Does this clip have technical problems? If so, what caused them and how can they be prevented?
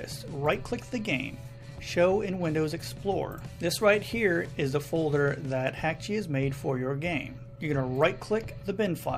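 No, nothing stood out as a technical problem on listening, so there is nothing here that needs preventing.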